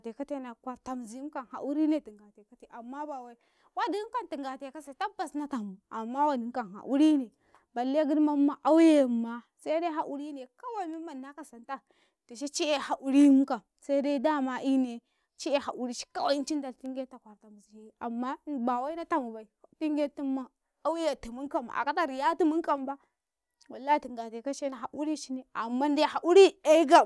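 No technical faults can be heard anywhere in the recording, and the signal stays steady and intact throughout.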